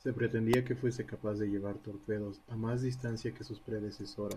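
An electrical switching spike lands at 0.53 s, just before "que fuese capaz de". It is a sharp snap, peaking around -10 dBFS, laid over the speech. It is likely an arc from a nearby switch or motor picked up by the audio line.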